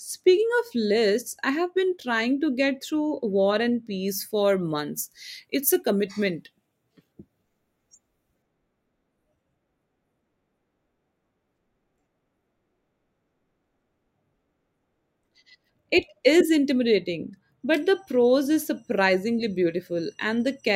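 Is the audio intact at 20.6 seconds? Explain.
Yes, the speech at 20.6 seconds is intact, with no dropout, click, glitch or other fault audible at that moment.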